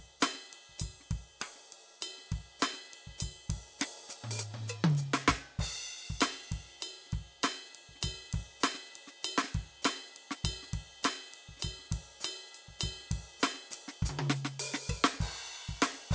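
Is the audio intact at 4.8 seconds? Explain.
No. At 4.8 seconds the music carries the fault of a resampler restarted on every block, as it does throughout the clip. The conversion from 48 kHz to 16 kHz was done on each 50 ms block separately. At every block edge the converter lacked the true neighbouring samples, so a small error lands there. The result is a steady tick at 20 Hz, heard only while sound is playing.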